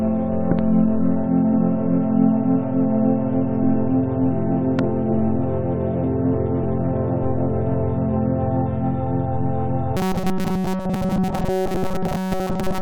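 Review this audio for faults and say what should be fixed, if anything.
Loud pops: a double pop at 0.52–0.61 s and a single one at 4.79–4.81 s, each sitting about 15 dB above the sound, likely from plugging in, switching or a static discharge. Prevention: mute or power down before connecting or switching anything, and keep cables and grounding tidy.

Robotic sound from repeated short buffers: from 9.97 s to the end, most of the audio is replaced by repeats of a tiny chunk, giving a rigid metallic buzz at 188 Hz. That rate fits a buffer of about 5.3 ms, likely from audio arriving too slowly. Prevention: use a larger buffer or reduce the system load so the audio never runs dry.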